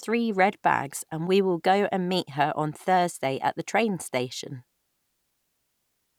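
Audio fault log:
No faults heard anywhere in this speech recording.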